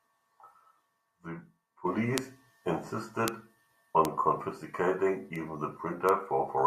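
Speech, marked by five bit error spikes at 2.18, 3.28, 4.05, 5.36 and 6.09 s. Each is a single sharp, broadband tick unrelated to the sound around it. Peaks reach about -4 dBFS at the first two, about -10 dBFS at 4.05 and 6.09 s, and about -22 dBFS at 5.36 s. The jump-and-return shape fits one to three samples with a flipped bit.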